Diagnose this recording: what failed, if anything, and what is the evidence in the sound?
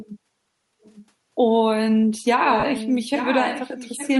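A breathy, grainy edge runs through the whole speech clip, with the upper frequencies replaced by a hiss-like texture rather than real detail. That points to the codec stage, likely Bluetooth LC3 compression. At around 48 kbps with 10 ms frames, the transform coder discards much of the upper spectrum and fills it with noise.

From 0.82 to 1.02 s a faint second copy of the speech appears, well below the main level. From 2.46 s to the end it returns much stronger, only about 10 dB down. Both copies trail the original by 0.86 s. This is an echo leak at the call-processing stage, likely from a far-end loudspeaker whose echo canceller failed to remove what its microphone picked up.

Between 2.60 and 2.63 s the sound briefly turns into a noisy, smeared blur for about 30 ms. These are lost LE Audio frames on the wireless link. The decoder covered the gap by reusing the last spectrum with randomised signs, which fits three missing 10 ms frames.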